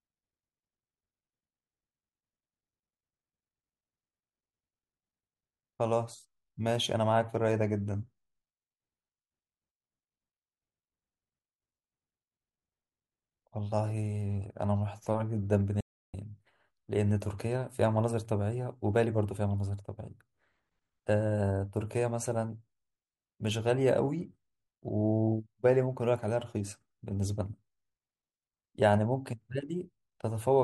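A speech recording with one audio dropout to silence. From 15.81 s to 16.14 s, about 0.33 s, the sound cuts off completely. No room tone remains in the gap. The likely cause is a brief loss of input while recording continued, writing silence.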